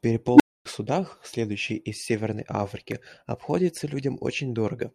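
At 0.34 s a recursive filter in the chain goes unstable: its coefficients let the feedback grow rather than decay, so its output rises without bound until the values overflow and the filter resets. In this speech clip that is a low tone of around 300 Hz swelling to a loud, clipped squeal in about 56 ms, then a dead gap of about 0.26 s before the speech returns at 0.65 s with "судах следующих из".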